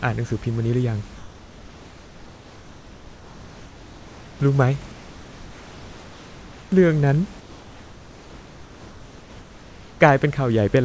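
Comfort noise in place of the background fills the pauses in this speech clip at 1.16–4.40 s, 4.92–6.72 s and 7.40–10.00 s. The room tone gives way to a flat, featureless hiss about 2–3 dB quieter, likely from discontinuous transmission muting the sender and the receiver synthesising noise.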